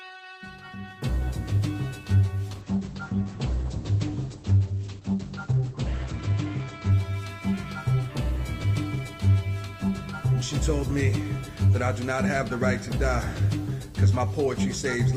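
From 2.53 s to 7.47 s the sound turns muffled and rough, its top end cut off at 8 kHz instead of 20 kHz, bottoming out for about 3.6 s. This is a call bitrate drop: the encoder was starved of bits, consistent with a fall from around 32 to 10 kbps.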